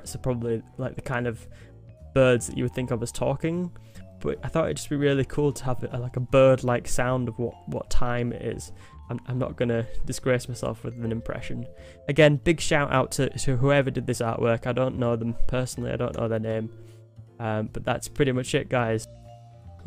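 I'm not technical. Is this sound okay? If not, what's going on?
Yes, this sound is fine. Nothing in it cuts out, jumps, or sounds broken at any point.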